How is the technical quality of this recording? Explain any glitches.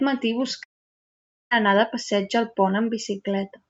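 The speech is interrupted by one long gap. From 0.63 to 1.53 s the sound trails off into a fading buzz or hiss, then near silence, before returning at "anar de passeig al": likely a long network dropout, with the lost audio never arriving. Elsewhere the call codec limits the top end to about 8 kHz.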